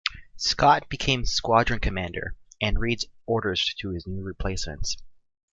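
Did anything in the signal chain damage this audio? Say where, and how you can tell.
No, nothing along the chain from capture to playback has audibly damaged this speech recording.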